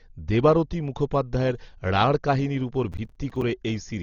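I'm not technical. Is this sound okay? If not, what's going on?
No. The whole recording sounds dull and muffled, with nothing above about 6.9 kHz and a rough, fluttering hiss clinging to the voice. That points to heavy Dolby Digital compression, likely from squeezing the file too hard. Unlike a simple muffled microphone, it adds that grainy, swirling noise.

From 2.92 to 3.42 s, just after "কাহিনির' ওপর", there is processor overload crackle. The computer fell behind about ten times in a row, each time dropping a tiny slice of roughly 5 ms to silence. This gives a gritty tearing burst rather than one clean dropout, and it stops once the computer catches up.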